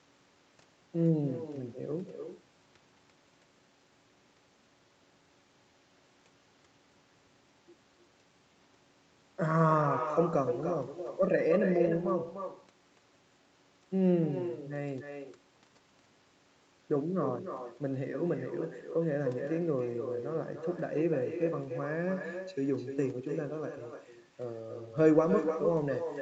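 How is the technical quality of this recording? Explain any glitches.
The main problem is an echo running through the whole recording, on top of call audio that tops out around 8 kHz, which fits an Opus call at roughly 32 kbps.

It's echo with no canceller, present from start to finish. The far end's loudspeaker was picked up by its microphone, and nothing stripped it out, so the talker's voice comes back about a third of a second later, around 8 dB quieter, as a thin shadow trailing the speech.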